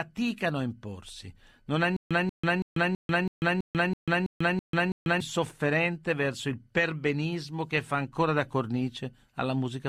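From 1.97 to 5.20 s there's a stutter with silent gaps: a 186 ms burst repeats ten times, every 328 ms, with 142 ms of dead silence between, likely a stalled stream retrying.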